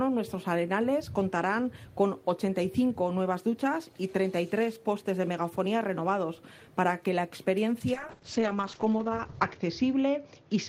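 From 7.94 s to the end, the sound turns rough and muffled, losing its top end, and stays degraded at its coarsest for about 1.62 s. This is a call bitrate drop. The bandwidth estimate fell and the encoder was forced to spend far fewer bits, which fits a fall from about 32 to 8 kbps. It quantises coarsely and narrows the coded band from 20 kHz to 8 kHz.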